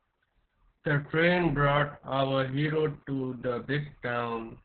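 Opus voice compression runs through the whole clip: the speech is cut off at about 4.4 kHz and sounds muffled, hoarse and faintly robotic. Plain low-pass filtering would only dull it. The grainy, buzzy texture comes from coarsely coded excitation, which fits a narrowband SILK encode near 6 kbps.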